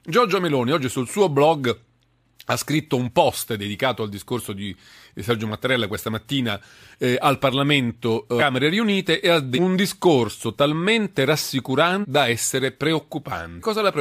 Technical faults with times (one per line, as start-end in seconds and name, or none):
8.38-8.42 compressed frames skipped
9.55-9.59 compressed frames skipped
12.01-12.05 compressed frames skipped
13.59-13.63 compressed frames skipped